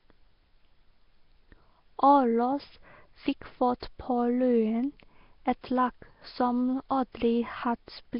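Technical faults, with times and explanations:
Throughout, Nellymoser compression: the speech carries a rough, hissy halo and a smeared, underwater quality, with nothing above 5.3 kHz. The likely cause is Flash's Nellymoser Asao codec, which works on short blocks at a fixed, very low bit budget. Weaker frequency bands in each block get no bits and are filled with noise, producing the hiss and blur. The heavy damage fits a rate near 22 kbps.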